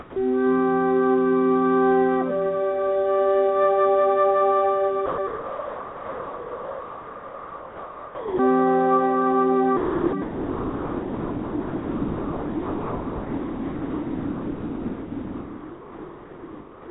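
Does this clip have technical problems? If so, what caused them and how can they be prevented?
Yes. Sound dropped by the voice detector, likely, gives way to steady comfort noise at 0.00–0.16, 5.06–5.18, 5.27–8.39, 9.77–10.13 and 10.22 s onward. The smooth, even hiss distinguishes it from packet loss, which leaves clicks or warbling. The call path is band-limited to 4 kHz, consistent with a G.711 codec. To prevent these dropouts, disable voice activity detection or lower its threshold for non-speech sound.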